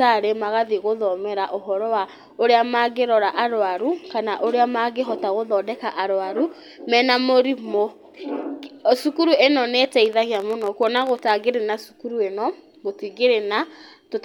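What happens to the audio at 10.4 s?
A train of clicks runs from 10.06 to 11.32 s, between "cukuru ĩno nĩ" and "na cukuru ĩno": about twenty similar pops at roughly 16 per second, unevenly spaced and as loud as the speech, likely from interference or a faulty connection or power supply injecting repeated pulses.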